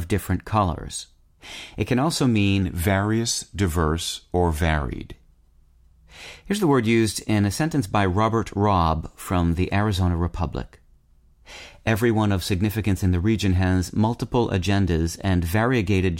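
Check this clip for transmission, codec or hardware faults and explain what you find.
One fault. From 2.62 to 5.14 s, after "can also", a wrong sample rate: speech runs at 0.92x speed and about 1.5 semitones low, consistent with 48 kHz audio played at 44.1 kHz.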